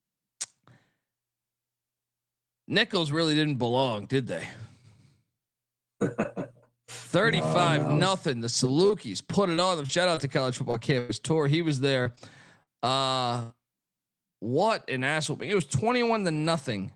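From 8.87 to 13.53 s the speech suffers repeated packet loss, giving a robotic sound. About a dozen short holes open in quick succession, the longest about 98 ms. Each is patched by stretching the preceding sound, so the speech turns choppy, with fragments missing. Unlike a single dropout or one long concealed gap, the damage recurs throughout this stretch: several brief repairs, roughly a fifth of a second rebuilt in all, rather than one isolated break.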